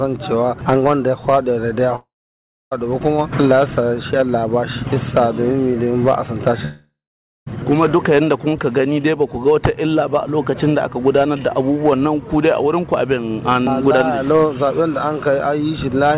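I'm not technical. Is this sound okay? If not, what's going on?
No. The sound cuts out twice, from 1.96 to 2.73 s and from 6.65 to 7.48 s. Each gap begins with a short fading buzz, then goes silent for about half a second, and the sound returns with a piece missing. The cause is likely a long network dropout.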